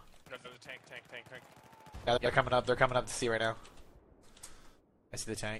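The audio breaks into a brief garbled flutter twice, from 0.36 to 0.55 s and again from 2.07 to 2.27 s, where a stretch of about 0.2 s seems to stumble over itself before carrying on with no gap and no lost time. This is frames out of order: two adjacent blocks of roughly 93 ms each were decoded in swapped sequence, so each affected stretch plays its second half first, which fits runs of about four codec frames being exchanged.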